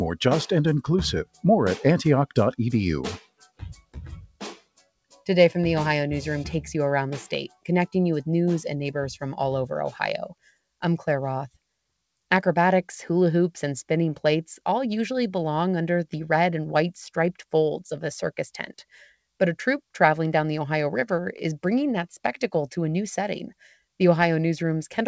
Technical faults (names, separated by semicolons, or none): sound cut by the noise suppressor